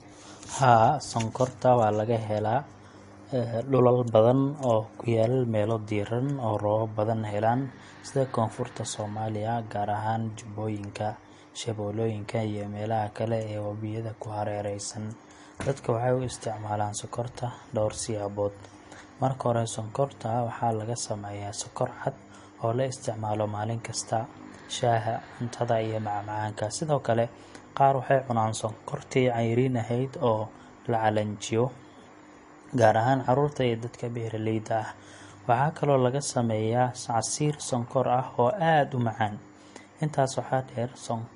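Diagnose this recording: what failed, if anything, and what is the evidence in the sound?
Throughout the speech the treble stops dead at about 10.6 kHz, and the damage is plainly audible: a watery, swirling texture with smeared consonant attacks. The stage is the codec, and the cause is likely MP3 compression at a low bitrate, roughly what 40 kbps would give. Starved of bits, the encoder lowpasses the top band and drops quieter frequency lines, which flicker in and out between frames and leave that unsteady texture.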